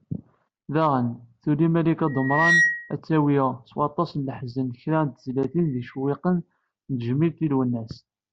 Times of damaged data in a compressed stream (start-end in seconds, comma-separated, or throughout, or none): none